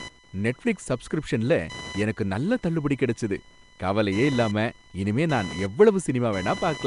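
From start to finish, computer activity noise runs under the speech. Load changes in the computer's processor, graphics card or mouse disturb the ground that the audio circuit shares. That ground movement leaks into the signal. Here it is a buzzing chirp pulsing at around 1 kHz. It sits roughly 20 dB below the speech. It follows the machine's activity, not the talking. So it carries on through pauses too.

Throughout the clip, the speech also sounds rough and smeared. A hissy halo clings to it, with a watery, underwater blur. Nothing is heard above 10.6 kHz. This is likely Nellymoser compression, the old Flash microphone codec. It codes short blocks with a fixed, small bit budget. Weak bands get no bits and are filled with noise. The damage is plainly audible and fits a rate of about 44 kbps.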